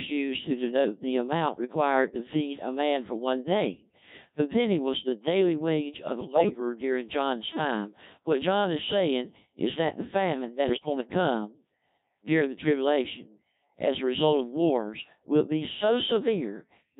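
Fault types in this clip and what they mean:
Codec 2 vocoder: the speech is rebuilt from pitch, voicing and spectral-envelope parameters at a rate that fits 1.3 kbit/s, so it sounds heavily robotic and buzzy throughout.
Bit errors on digital voice radio: corrupted vocoder frames at 6.20–6.60 s and 10.68–10.86 s make the pitch, level and timbre jump into warbling, bleeping gibberish.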